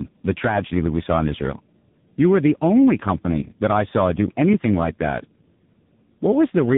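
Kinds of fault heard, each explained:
Tandem speech coding: the call crossed several links that each use a speech codec, so the audio was decoded and coded again at every border, and each coder had to work on the previous one's already damaged output. The result fits three speech codecs in a row, ending in a low-rate AMR narrowband coder. Throughout the clip the speech sounds rougher, more muffled and more warbly than a single codec would leave it, with nothing above 3.8 kHz.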